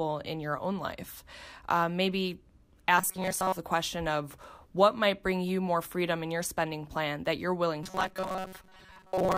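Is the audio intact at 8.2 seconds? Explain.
No, at 8.2 seconds you're inside a stretch of robotic sound from repeated short buffers that runs from 7.83 s to the end at 9.37 s. The speech collapses into a stiff, metallic buzz around 188 Hz. That pitch fits a loop of about 5.3 ms being played over and over, likely because new audio wasn't arriving in time. Most of the real audio in that stretch gets skipped.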